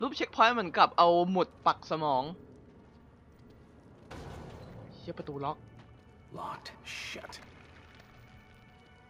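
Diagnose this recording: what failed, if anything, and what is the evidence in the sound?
Nothing in the recording points to a failure at any stage of the chain. There is no event in the sound that would need to be traced back to wiring, conversion, processing, transmission, storage or playback.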